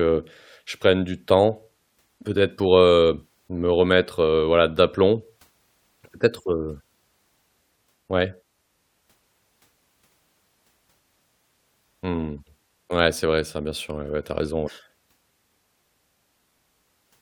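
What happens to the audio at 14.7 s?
Right after "ouais tu as raison", from 14.66 to 14.69 s, damaged data in the compressed stream makes the decoder misread the frames and lose sync, producing a brief glitch. The waveform shows a brief discontinuity.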